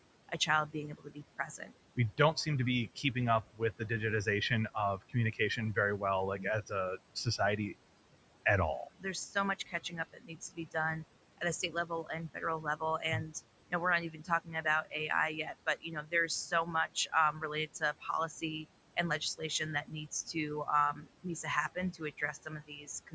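Noise suppressor artifacts run through the whole clip. The suppressor pulls the room noise down by about 18 dB between phrases, so the background sinks in gaps and rises back under speech. A spectrogram shows the noise floor pumping frame by frame, with dark gaps that fill in whenever speech starts, and nothing above 8 kHz.

Speech cut by the noise suppressor comes in four stretches: 0.29 to 7.58 s, 8.99 to 10.75 s just after "at all", 11.38 to 14.93 s, and 15.46 s to the end. The suppressor mistakes soft consonants and word endings for noise and ducks them by up to about 15, 17, 16 and 18 dB. The affected parts total roughly a second, half a second, under a second and one and a half seconds. These bits sound swallowed. On the waveform, tails of words collapse abruptly, and the spectrogram shows high-frequency consonant energy missing.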